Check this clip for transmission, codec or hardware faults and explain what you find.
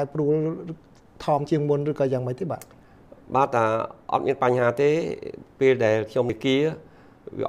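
Two brief glitches stand out, both damaged data in a compressed stream. At 1.47 s and again at 6.30 s a short blip breaks through as corrupted frames throw the decoder out of sync until it finds the next frame header.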